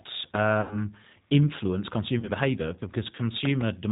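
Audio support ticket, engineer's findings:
G.729 codec, full length: band ends at 4 kHz, speech rough and slightly synthetic from pulse-coded excitation, consistent with an 8 kbit/s G.729A path. Unlike a plain narrowband filter, the grain comes from coarse resynthesis, not just missing highs.

VoIP packet loss concealed by the speech codec, 0.61–0.89 s and 2.19–2.31 s: not silent gaps but a stretched buzzy tone or coloured noise that fades, fitting about 100 ms then 40 ms lost. The decoder extrapolates the last frame, and the voice stays weak just after recovery.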